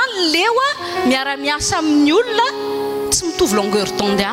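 There are no technical faults to describe in time order in this audio.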